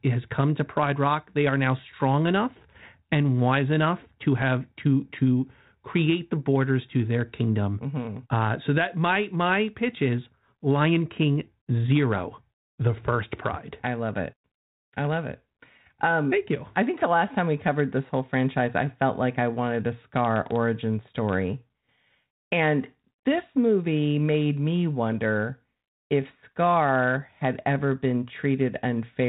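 Nothing stood out on listening to this speech recording.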